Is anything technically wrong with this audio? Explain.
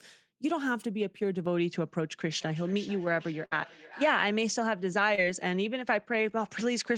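Yes, there are four separate problems.

From 1.46 s to the end the sound loses its top, and a faint new noise floor appears, roughly 55 dB below the speech. There is no gap and no obvious level jump. This is likely an input switched to a poorer device, such as another microphone or a headset's call profile, with a narrower band.

Between 2.29 s and 4.33 s each phrase returns around every 400 ms, thinner and ringier, peaking at about 15 dB below the direct speech. That is feedback echo between two devices: one device replays the other's audio, and that microphone captures it again.

At 3.45 to 3.53 s a burst of packet loss leaves about 60 ms missing. The receiver extended the last sound and faded it, giving a brief held buzz or hiss before the audio resumes with that stretch gone.

At 5.15 to 5.20 s a short concealed packet loss of about 20 ms was patched by continuing the preceding sound, heard as a tiny smear or wobble where a short consonant may drop out.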